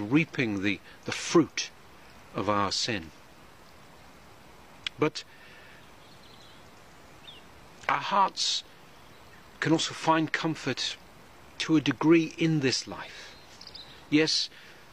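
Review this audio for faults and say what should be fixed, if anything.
Three short bursts of damaged data in the compressed stream occur at 7.34 to 7.39 s, 9.99 to 10.03 s and 13.05 to 13.10 s, each lasting 40 to 50 ms. Corrupted bytes there make the decoder misread the affected frames and lose sync until it finds the next valid frame header, producing a brief glitch. To prevent this, add integrity checks such as per-frame CRCs, and fix the transport or storage step that damages the bytes.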